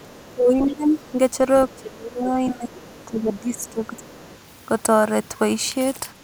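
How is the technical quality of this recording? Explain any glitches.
The recording has clear problems from echo cancellation on a speakerphone-style call.

Other side's voice leaking through: faint second voice, roughly 30 to 35 dB below the talker, at 0.01–0.29, 0.97–1.11, 1.68–1.82 and 2.48–4.38 s, likely loudspeaker echo the canceller left in.

Speech suppressed in double talk: the talker dips by up to about 20 dB at 0.02–1.18, 1.75–4.02 and 6.13–6.19 s, likely from the canceller ducking both voices during overlap.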